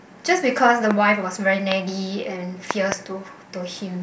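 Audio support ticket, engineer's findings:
Loud pop in the speech track. Sharp single pops at 0.91 s and 1.72 s, peaking about 15 dB and about 20 dB above the signal. Double pop between 2.71 and 2.94 s, about 20 dB over. The speech continues underneath each one. Likely cause: a sudden voltage step or pulse entering the chain, from a plug, switch, static discharge or driver glitch, which the downstream circuitry shapes into a brief thump.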